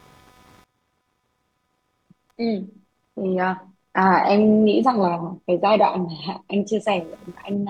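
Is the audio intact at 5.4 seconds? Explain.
No. At 5.4 seconds, as throughout the speech, computer activity noise sits under the signal. Shifting processor or graphics load disturbs the ground shared with the audio circuit, producing a faint buzzing chirp pulsing at around 300 per second, roughly 40 dB below the speech. It follows the machine's activity, not the voice. A spectrogram shows a comb of harmonics near 300 Hz spacing, with texture unrelated to the speech, and the waveform shows a low-level ripple in the gaps.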